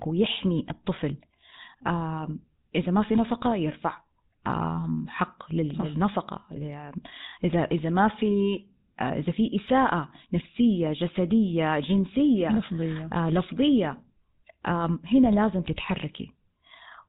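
It's a speech clip with GSM full-rate codec damage all the way through, and it's plainly audible: a buzzy, gravelly grain from pulse-driven excitation, with nothing above 4 kHz. The roughness fits an old 13 kbps GSM phone link.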